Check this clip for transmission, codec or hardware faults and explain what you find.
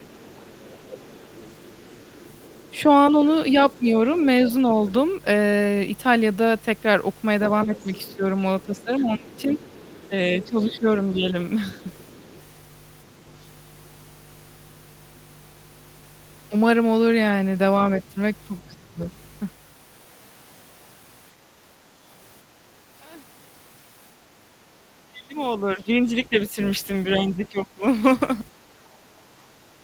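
There are three faults in this speech clip: mains hum, speech suppressed in double talk, and the other side's voice leaking through.

Mains hum runs through the whole clip. It is a steady low tone at 50 Hz, sitting about 15 dB below the speech. The power line is getting into the signal path, likely through a ground loop or a nearby transformer. The tone stays fixed in pitch and level from start to end.

Speech suppressed in double talk occurs four times: 0.00 to 0.31 s, 7.66 to 11.79 s, 18.69 to 19.00 s and 25.07 to 27.83 s. The talker's voice dips sharply in level each time. The drop reaches about 20 dB in the first, 15 dB in the second, 25 dB in the third and 15 dB in the fourth. The short events last roughly 200 and 300 ms. The two longer ones add up to about one and a half seconds of dips each. This is likely an echo canceller that could not tell the talker apart from loudspeaker echo while both sides spoke, so it turned everything down.

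The other side's voice leaking through appears from 0.07 to 4.92 s, 7.76 to 12.41 s and 25.58 to 27.47 s. A second, fainter voice sits behind the talker. It is about 25 dB below the speech in the first two stretches and about 20 dB below in the last. The far end is likely playing on a loudspeaker, and the echo canceller is leaving part of it in the microphone signal. These stretches overlap suppression events, which fits both sides talking at once.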